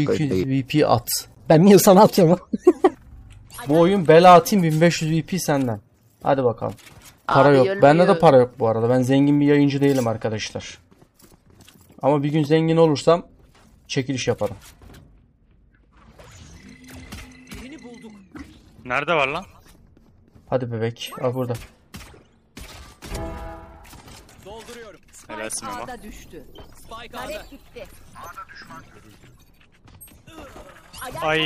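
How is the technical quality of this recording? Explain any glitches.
One codec glitch stands out. At 22.55 s there is pre-echo. A brief hiss, about 12 dB above the quiet before it, leads a sharp attack. The coder spread its noise across a block of roughly 26 ms, which fits a codec that never switched to short blocks. The attack sounds smeared.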